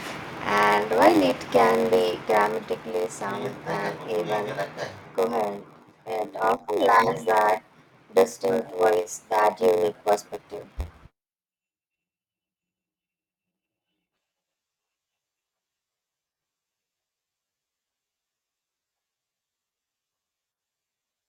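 A block size mismatch (padded) runs through the whole of this speech clip, from start to end. One stage hands over shorter blocks than the next stage reads, and each block is topped up with zeros, so a brief silent gap lands in every block. The gaps repeat fast enough to be heard as a buzz at about 93.8 Hz, which fits a 512-sample read. The inserted silence stretches the speech to 0.938 times normal speed while its timbre stays the same.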